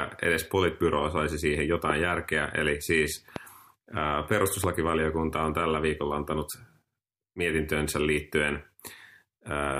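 Loud pops occur at 1.90 to 1.92 s, 3.36 to 3.38 s and 4.64 to 4.66 s, each a single sharp crack about 15 dB above the speech, which continues underneath. A sudden voltage pulse, likely from a switch, plug contact or static discharge, was added to the signal.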